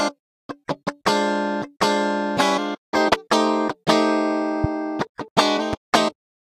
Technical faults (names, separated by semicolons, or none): loud pop